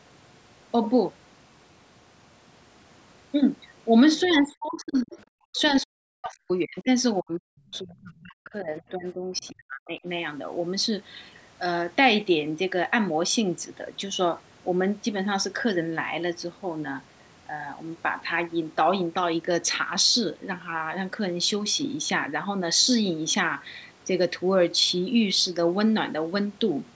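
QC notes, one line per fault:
4.16–4.34 s, 5.56–5.61 s, 7.74–7.79 s, 8.16–8.21 s, other side's voice leaking through: faint second-voice fragments about 30 to 35 dB below the speech, likely residual loudspeaker echo the echo canceller missed.
4.23–4.32 s, 4.48–5.18 s, 5.52–6.89 s, 7.21–10.06 s, speech suppressed in double talk: the voice dips by about 5 dB at first, then by up to about 40 dB in later stretches. The likely cause is the echo canceller turning the near talker down along with the overlapping far-end echo.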